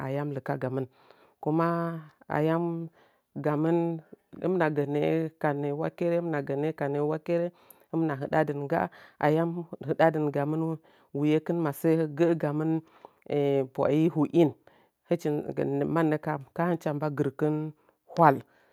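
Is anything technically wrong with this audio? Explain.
No, nothing technically wrong turns up anywhere in this speech recording, so there's nothing to flag.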